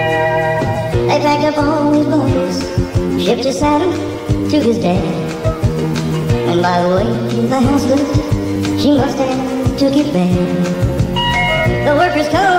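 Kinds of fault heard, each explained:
Wrong sample rate: the audio plays throughout at 1.5 times its proper speed and about 7 semitones high, which fits 32 kHz material played at 48 kHz. A spectrogram shows every component shifted up by 1.5 and squeezed in time, and waveform cycles look compressed.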